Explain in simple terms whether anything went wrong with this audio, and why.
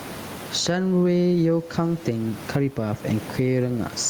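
Gain pumping runs through the whole recording: loud and soft parts end up closer in level and the sound is squashed, likely from a fast limiter fighting overly high microphone gain.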